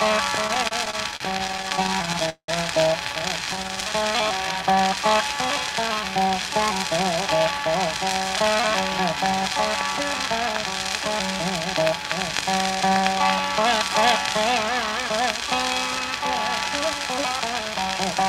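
The sound shows repeated stalls (stutter) from 0.47 to 2.50 s and again from 3.44 to 3.83 s. Late packets drained the jitter buffer. The receiver stretched and faded the last sound to bridge the waits, up to 187 ms. Nothing is lost, but the audio drags.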